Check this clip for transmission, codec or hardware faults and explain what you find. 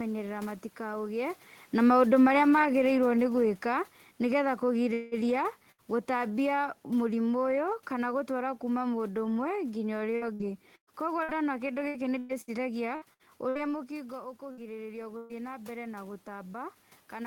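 Five kinds of fault are present in this speech, all from network delivery and automatic gain control.

From 1.77 to 5.50 s, automatic gain falling. The gain control judged the input too loud or its background noise too strong, and lowered its gain by about 6 dB over almost four seconds. Speech and room noise sink together. The talker also shifts position near 1 s.

From 4.93 to 5.14 s, a long network dropout is the likely cause. About 180 ms of audio is missing. The receiver fills the whole gap by extending the last sound, so a fading buzz or hiss replaces the speech with no silent stretch.

Three bursts of packet loss occur at 5.71 to 5.83 s, 14.52 to 14.60 s and 15.17 to 15.32 s. The gaps are about 60, 60 and 120 ms. Each hole is patched by continuing the preceding sound at falling level. Speech then resumes past the lost piece.

From 10.16 to 13.71 s, repeated packet loss gives a robotic sound. 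Eleven gaps, the longest 115 ms, remove about 720 ms in total. Concealment covers roughly a fifth of the stretch. Rapid patching makes the speech choppy.

From 13.87 s to the end, automatic gain rising. The input became about 10 dB quieter, and the talker moves near 13.5 s. The gain control then lifts its gain gradually, and speech and background swell together.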